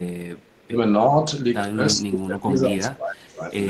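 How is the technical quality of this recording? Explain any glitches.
The recording has two clear level drops in the speech. Both fit speech suppressed in double talk. The first runs from 0.59 to 0.77 s and dips by about 20 dB. The second is longer, from 1.95 to 3.42 s, and sinks by about 25 dB at its deepest. The likely cause is an echo canceller hearing both sides at once. It could not tell this talker from loudspeaker echo, so it turned everything down. The speech fades, then returns.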